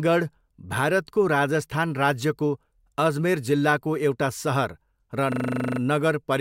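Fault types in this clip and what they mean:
System hang loop: from 5.32 to 5.8 s the speech freezes into a single 40 ms slice repeated twelve times, a rapid 25 Hz buzzing stutter, as the playback hardware kept cycling its ring buffer while the system stalled; essentially no audio goes missing.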